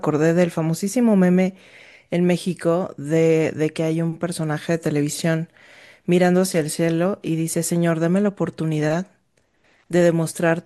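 A speech recording with no audible technical faults at any point.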